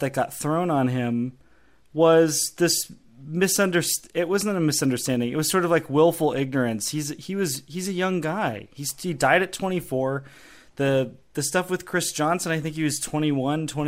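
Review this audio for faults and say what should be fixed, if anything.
DAB burbling occurs from 3.50 to 3.57 s, just after "on him was this". Weak reception let bit errors slip past the error correction into the MP2 audio data, so corrupted samples put short blips of noise into single sub-bands. The result is a brief burble over the speech lasting about 70 ms, which fits roughly four damaged frames and a bit error rate near a tenth of a percent.

Improving reception with a better-placed antenna or a stronger multiplex signal, or broadcasting at a higher protection level, would keep errors within what the error correction can repair.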